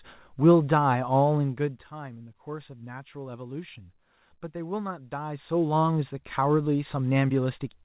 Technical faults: none

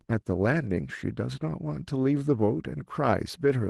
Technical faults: none

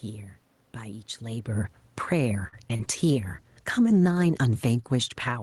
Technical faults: automatic gain falling; short stall from a late packet; short concealed packet loss; call bitrate drop

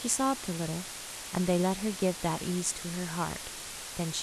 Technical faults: low bit depth with dither

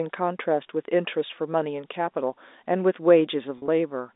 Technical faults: packet loss with pitch repetition

